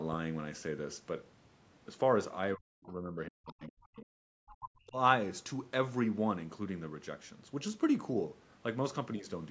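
From 2.55 to 4.05 s, the echo canceller likely could not tell the talker apart from loudspeaker echo while both sides spoke at once, so it turned the microphone down. This speech suppressed in double talk cuts the voice in pieces, about a second in all, with the deepest dips around 40 dB, leaving gaps and faded syllables. Inside that stretch, at 2.83 to 2.92 s and again at 3.84 to 4.05 s, the canceller likely left part of the loudspeaker signal in the microphone. The other side's voice leaks through as brief scraps, roughly 30 dB and then 25 dB below the talker. From 4.36 to 4.97 s the same double-talk suppression returns. The voice drops away in pieces for about 0.7 s, again by as much as 40 dB.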